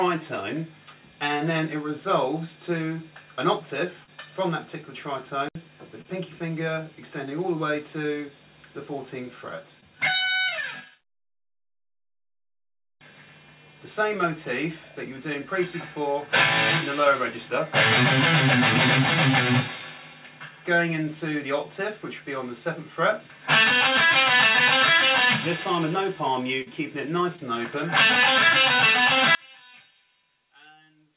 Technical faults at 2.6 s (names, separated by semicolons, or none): none